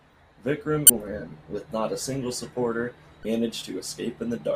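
At 0.87 to 0.90 s, just before "with not a single", and again at 3.22 to 3.25 s, right after "not a single supporter", the speech breaks up for about 30 ms. This is damaged data in a compressed stream: corrupted bytes make the decoder misread the frames and lose sync until it finds the next valid header.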